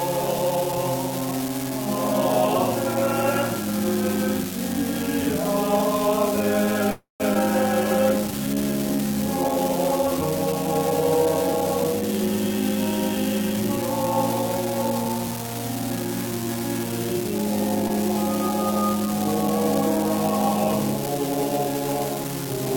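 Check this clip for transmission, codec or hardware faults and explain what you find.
Four kinds of fault are audible.

Unreliable data bit, throughout: a marginal data line flips one bit in random samples, adding equal-sized spikes heard as steady crackle, even in pauses.

Call audio freeze, 6.91 to 7.22 s: the last sound is stretched into a fading buzz ending in about 150 ms of silence, likely because delayed packets emptied the jitter buffer. Playback then resumes with nothing lost.

Skip ahead, 7.34 to 7.37 s and 17.88 to 17.91 s: audio was dropped while later audio was already waiting. Roughly 150 ms and 70 ms vanish, and each jump is joined almost seamlessly.

Jitter buffer slow-down, 8.31 to 10.06 s: the low buffer repeated single pitch periods, adding 47 ms. The audio plays at 98% speed, slightly drawn out at unchanged pitch.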